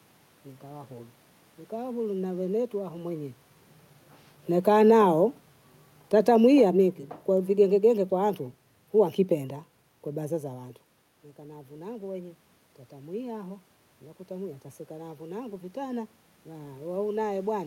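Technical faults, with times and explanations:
6.05 to 8.44 s, automatic gain falling: the automatic gain control judged the input too loud or its background noise too strong and stepped its gain down gradually, by about 4 dB over those 2.4 seconds. The speech therefore fades steadily rather than all at once, and the room noise behind it sinks by the same amount. That shared drop marks it as a gain change, unlike the level shifts near 3 s and 10.5 s, where the talker moves relative to the microphone.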